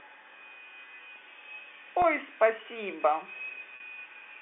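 At 2.02 to 2.04 s and again at 3.76 to 3.80 s there is packet loss with pitch repetition. Audio went missing, about 20 ms the first time and 40 ms the second, which fits one and then two lost 20 ms packets on this G.711 telephone line. The receiver filled each gap by repeating the last pitch period, so the sound briefly holds with a slightly buzzy, sustained quality. The longer second gap fades more noticeably before normal audio cross-fades back in.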